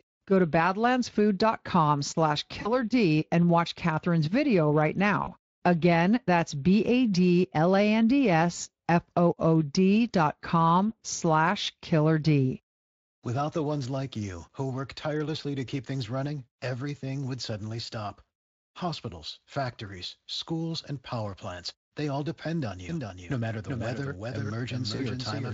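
At 2.61, 5.23 and 24.95 s, VoIP packet loss concealed by the speech codec: about 40 ms goes missing each time, which fits two lost 20 ms frames. The decoder stretches the sound into a buzzy tone or coloured noise that fades instead of leaving silence. From 22.89 s to the end, a doubled audio track sets in abruptly: a full-band copy trails around 400 ms behind, roughly 5 dB quieter, likely from a second, slower capture path. It has no decaying room tail, unlike an echo.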